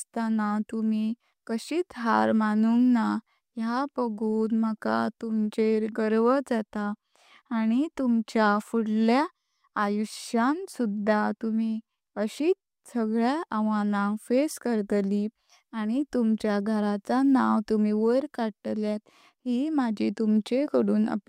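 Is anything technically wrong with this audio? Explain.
No, nothing technically wrong turns up anywhere in this recording, so there's nothing here to fix.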